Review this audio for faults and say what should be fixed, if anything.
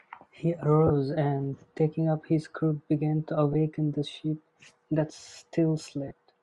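Throughout the speech, a grainy, breathy edge sits on the upper frequencies, likely Bluetooth LC3 compression filling discarded high bands with noise, which fits a bitrate around 48 kbps. To prevent it, raise the LC3 bitrate or use a higher-quality LE Audio configuration.

Brief noisy smears replace the speech at 0.87 to 0.91 s, 3.53 to 3.56 s and 6.08 to 6.11 s. These are lost LE Audio frames, about 30, 20 and 30 ms long, covered by the decoder replaying the last spectrum with scrambled signs. To prevent them, improve the radio link by shortening the distance, reducing interference or adding retransmission headroom.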